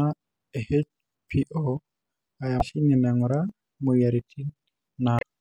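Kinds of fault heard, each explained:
Damaged data in a compressed stream: two brief glitches break the speech at 2.58 to 2.62 s and 5.16 to 5.23 s. Corrupted bytes in the encoded stream make the decoder misread those frames and lose sync until it locks onto a clean frame header.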